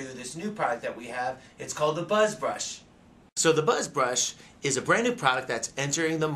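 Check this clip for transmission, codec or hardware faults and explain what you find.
No transmission, codec or hardware faults turn up anywhere in this clip.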